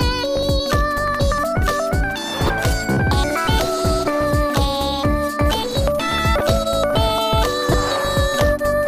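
At 2.45 to 2.49 s, 6.38 to 6.41 s and 7.72 to 7.74 s, a corrupt frame was decoded: damaged compressed data was played back as if valid. Misread codes and gains placed energy at wrong frequencies for the span of the damaged frames, likely a couple at first and a few later. Each event is a short blip of noise. The error peaks are roughly -5 dBFS in the first two and roughly 0 dBFS in the last.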